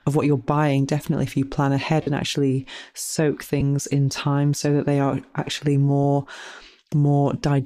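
Around 2.02 to 2.07 s, right after "if you plan ahead", there's a short dropout from lost LE Audio frames. About 45 ms is missing, which fits six 7.5 ms frames, and the decoder fills the gap by repeating the last spectrum with scrambled phase, so you hear a brief noisy smear instead of the speech. It happens again, shorter (about 15 ms), at 3.60 to 3.62 s after "ahead and actually soak". The light coding underneath is likely LC3.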